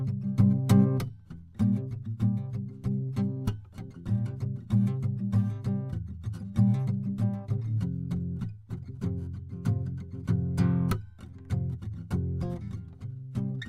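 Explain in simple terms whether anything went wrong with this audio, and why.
Nothing went wrong here: the music runs along steadily with no glitches, gaps or odd sounds anywhere along the way.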